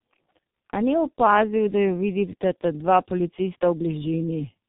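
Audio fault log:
Throughout: tandem speech coding. The audio passes through two low-rate speech codecs in sequence, consistent with AMR-NB at about 10.2 kbit/s followed by G.723.1 at about 6.3 kbit/s, with a G.711 mu-law link between them. Each coder models the already degraded output of the one before, so their errors compound. The result is rougher, more muffled and more warbly than either codec alone, and nothing is present above 3.8 kHz.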